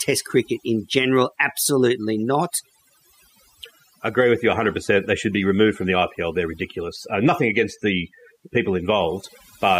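Throughout the speech, the background drops away and breaks into twinkling, warbling specks: overdone noise removal, where frequency bands judged near the noise estimate were pushed far down or shut off.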